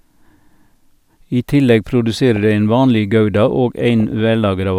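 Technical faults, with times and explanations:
2.29–2.44 s and 4.00–4.20 s, DAB burbling: after "I tillegg" and again after "ein vanleg gouda og", residual bit errors, roughly a few tenths of a percent, corrupt MP2 samples. The result is short blips of noise in single sub-bands, seen as blocky, flickering horizontal bands on a spectrogram.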